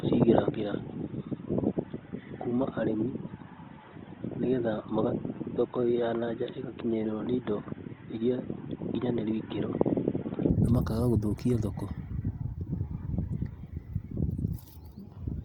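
From the start until 10.50 s the speech is dull and band-limited, with nothing above 3.8 kHz, somewhat quieter and carrying faint added background noise; likely an input switched to a poorer device. It ends abruptly with no gap, unlike a gradual filter change. Throughout, the sound is rough and grainy rather than swirly or holed, reaching up to 20.3 kHz, which points to Opus compression at about 24 kbps.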